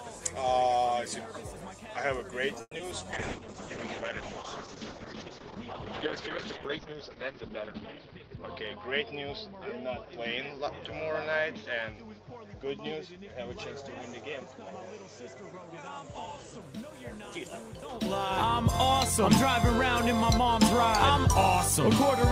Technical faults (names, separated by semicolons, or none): call audio freeze; short concealed packet loss; call bitrate drop; jitter buffer speed-up